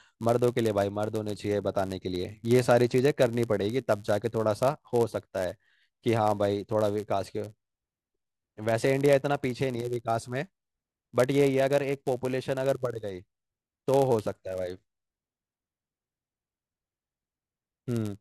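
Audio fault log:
throughout, block size mismatch (padded): a steady 99.6 Hz buzz sits under the speech. Each block gets a brief zero-filled gap where the writing stage delivers slightly fewer samples than the reading stage takes, so speech runs at 0.996 times normal speed.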